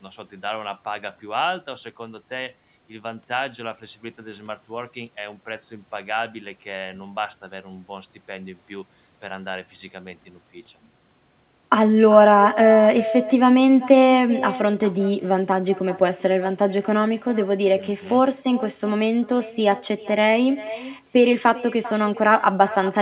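Throughout the speech, an echo with no canceller trails every phrase by roughly 0.4 s at about 16 dB below the direct signal. The far end's loudspeaker output is reaching its microphone unremoved, so a thinner copy shadows each syllable. The whole clip stops at 4 kHz, which points to a narrowband G.711-type call codec.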